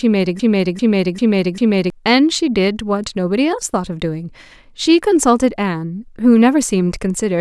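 A broken-record loop runs from 0.40 to 1.90 s: a 395 ms fragment of the speech repeats exactly four times, back to back. The likely cause is a stalled player or stream resending its last buffered piece, so the speech meant for that stretch is lost.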